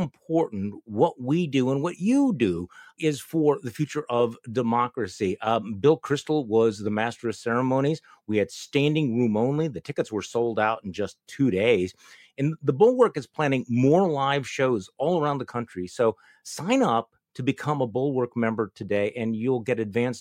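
Clock slip clicks run from 0.23 to 20.04 s as faint, regular ticks about five times a second, likely from two unsynchronised clocks drifting roughly 150 ppm apart.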